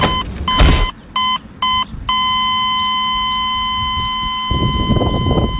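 No technical faults can be heard in the signal, which has passed through a WebRTC call path with nothing above 4 kHz, a band limit that fits G.711 mu-law coding at 64 kbps.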